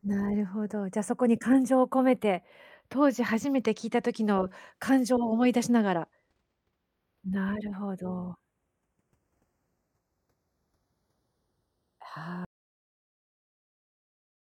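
Channels drifting apart, throughout: the two channels' clocks differ slightly, so their delay creeps to a fraction of a millisecond, heard in mono as slow flanging.

Audio dropout to silence, 12.45 s to the end: the speech cuts to total silence without room tone, likely an input lost while zeros kept being written.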